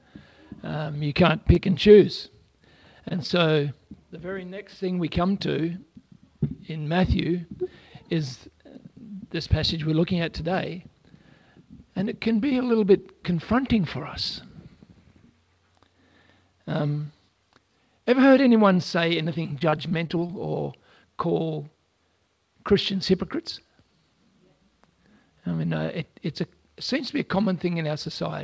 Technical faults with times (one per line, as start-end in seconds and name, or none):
1.54-1.58 short stall from a late packet
3.09-3.12 short stall from a late packet
3.26-3.31 short concealed packet loss
19.43-20.31 repeated packet loss (robotic sound)